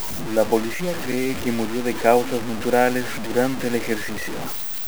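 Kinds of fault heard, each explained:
Low bit depth without dither: the speech carries a coarse, grainy distortion through the whole clip, with a gritty noise sitting only about 10 dB below the signal and changing as the sound changes, so softer passages turn rough and the faintest parts sputter or drop out. The likely cause is a signal reduced to about 5 bits by plain truncation with no dither, leaving rounding error that tracks the signal instead of masking it as steady hiss.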